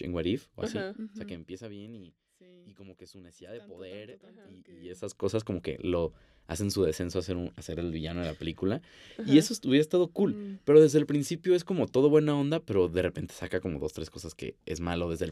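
No technical faults can be heard anywhere in this speech recording; the signal holds together without any audible defect.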